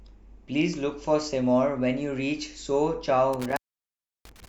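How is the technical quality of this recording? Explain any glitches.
There's one real problem, near the end of the speech. From about 3.33 s to 4.48 s you get an intermittent contact fault, basically a loose cable or plug briefly losing its connection. The signal drops out for roughly 0.68 s within that stretch, with crackle where the contact breaks and remakes. While the line's open, the speech is simply gone and faint hiss remains. It sounds like a connector briefly losing contact mid-take.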